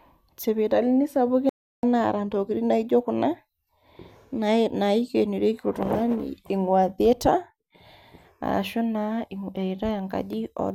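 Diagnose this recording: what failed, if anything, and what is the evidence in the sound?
At the playback stage, the player most likely ran dry of buffered data or had its output thread blocked, producing a playback stall. The speech cuts off mid-flow at 1.49 s and the output stays silent for 340 ms, until 1.83 s. It then resumes with "naata intokitin naijio kuna". That is how a stalled player behaves: it waits, then carries on.

At the codec or storage stage, compressed frames were skipped at 4.23 s. The decoder lost roughly one frame of the encoded stream, either because it was missing or because it was rejected as damaged. The frame length is 26.1 ms. About 30 ms of speech vanishes just before "nae naikenorieki", heard as a small forward jump.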